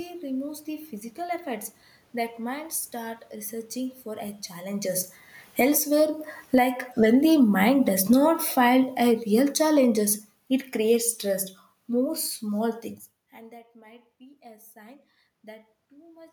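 Around 4.5 s the talker comes nearer the microphone, and from 4.76 to 5.85 s automatic gain falling pulls the level down by about 16 dB. Speech and room noise sink together, shown as a shrinking waveform envelope and a spectrogram dimming evenly across all frequencies. From 5.84 to 8.55 s the control reverses with automatic gain rising of about 6 dB, so everything swells back. Overlapping that, from 6.39 to 10.23 s, a second slow fall of about 11 dB settles just before "it creates stress more". After "stress more small things", the input drops by about 24 dB as the talker moves back near 13.0 s. From 13.31 to 16.28 s the gain climbs about 5 dB, lifting speech and background together in a gradual ramp on the waveform.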